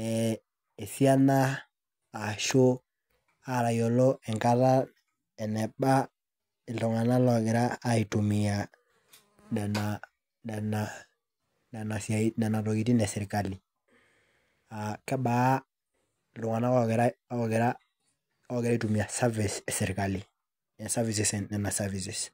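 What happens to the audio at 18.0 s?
At 18.0 s the audio is intact, with no fault audible at that moment.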